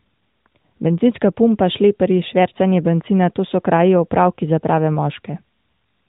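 Nothing here stands out as a technical fault.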